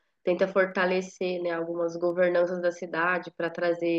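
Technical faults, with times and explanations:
0.71 to 3.48 s, word clock ticks: about three ticks, roughly every 1.5 s, as the receiving device's clock drifts against the sender's and one sample is dropped or repeated at each slip, which points to a clock mismatch of roughly 15 parts per million.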